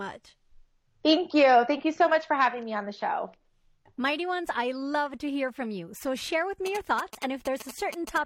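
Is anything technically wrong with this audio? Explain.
Yes. From 6.66 s to 8.18 s, just after "share with", there are GSM signalling bursts: a galloping dit-dit-dit run of short buzzes at roughly 10 dB below the speech. A nearby 2G phone is exchanging short radio bursts with its network, and the audio circuitry rectifies that RF into the signal, producing a buzz pulsed at about 217 Hz. Mains hum is steady and continuous at 50 or 60 Hz; this buzz comes in stuttering clusters.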